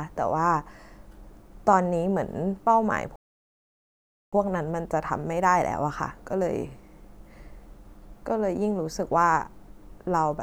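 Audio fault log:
3.16–4.33 s, playback stall: the speech cuts out in mid-flow and the output stays silent for about 1.17 s before resuming, which is likely the player running short of data or having its audio thread blocked until it could refill and carry on.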